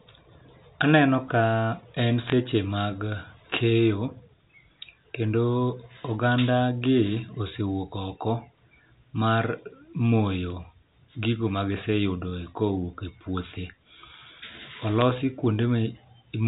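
Bit errors on a digital phone line cause sharp ticks from 2.23 to 2.32 s, just before "mag keyo", and at 15.01 s; flipped bits corrupt individual telephone samples.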